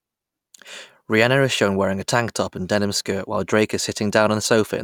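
No technical faults are audible.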